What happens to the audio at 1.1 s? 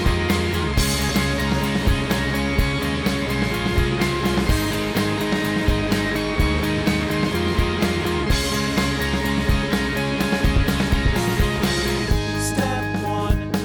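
At 1.1 s there's a brief burst of damaged data in a compressed stream, a glitch lasting about 18 milliseconds. A stretch of the encoded bytes came through corrupted, so the decoder couldn't make sense of the frames there, lost its place, and had to hunt for the next valid frame header before picking up again. You hear it as a quick glitch before playback resumes.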